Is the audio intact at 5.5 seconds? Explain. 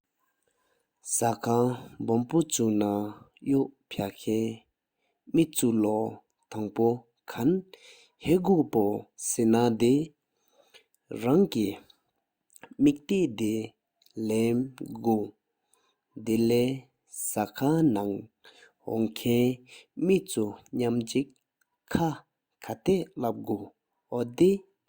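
Yes, at 5.5 seconds the speech plays through intact, with no dropout, click, distortion or other fault at that point.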